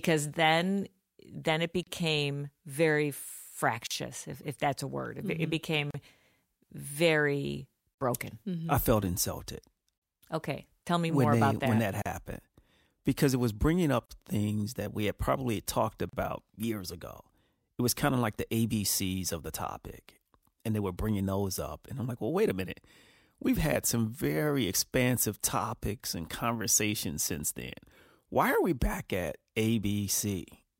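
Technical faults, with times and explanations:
1.83, 3.87, 5.91, 7.94, 9.98, 12.02, 14.06 and 16.09 s: gap at a join of encoded pieces. Roughly 2 s segments were encoded separately and joined untrimmed, so encoder delay and end padding remain, leaving about 36 to 38 ms silences with smeared edges before the speech resumes where it stopped.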